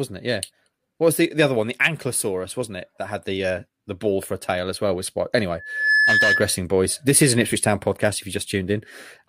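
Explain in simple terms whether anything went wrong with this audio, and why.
A microphone picked up its own loudspeaker, causing loudspeaker feedback squeal: from 5.59 to 6.62 s a 1.7 kHz tone swells within a fraction of a second, louder than the speech.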